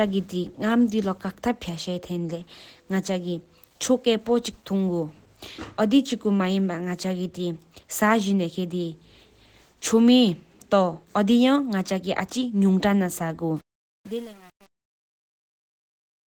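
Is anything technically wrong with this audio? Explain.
Yes, two things. Throughout, the speech sounds hoarse and grainy while still reaching up to about 20.1 kHz. That's likely Opus compression in hybrid mode, at a low rate around 16 kbps.

From 13.57 s to 16.27 s, there's truncation distortion on the fade. The level steps are too coarse, fitting roughly 7 bits with no dither, so the tail turns gritty.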